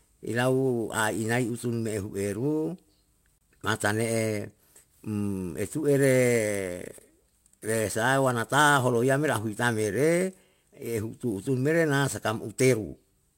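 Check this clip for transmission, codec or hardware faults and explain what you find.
Two faults are present: clock jitter throughout, and one short gap.

Sample clock jitter runs through the whole speech clip. The converter's clock wanders by several microseconds, so each sample is taken slightly off time. Steep parts of the waveform suffer most. The result is a hiss or roughness roughly 25 dB below the signal. It rises on loud, bright sounds and disappears in pauses.

A gap at a join of encoded pieces opens from 3.38 to 3.41 s, about 29 ms long. Two separately encoded pieces were spliced without trimming. The encoder's start-up delay and final-frame padding remain as silence. The speech drops out, with smeared edges, then resumes where it stopped.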